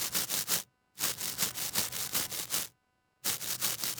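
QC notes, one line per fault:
Throughout: computer activity noise, a buzzy, chirping hash pulsing at around 300 Hz and sitting roughly 25 dB below the sound. Processor or graphics load is shifting the audio circuit's shared ground, so the interference follows the computer's workload rather than the sound itself.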